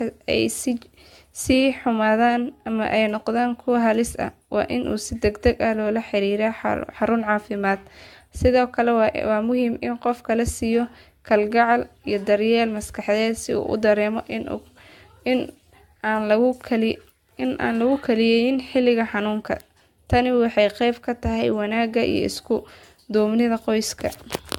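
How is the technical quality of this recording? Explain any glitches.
The recording has a clear technical flaw that runs through the whole clip: generation loss. The speech sounds swirly and hollow, with a smeared, watery texture. Consonant attacks blur instead of landing crisply. Nothing is present above 17 kHz. The likely cause is repeated lossy encoding, perhaps around five passes, with a character that fits AAC-LC at about 96 kbit/s. Each pass requantises on a shifted frame grid. Noise and spectral holes pile up, so the damage exceeds what one encode would leave.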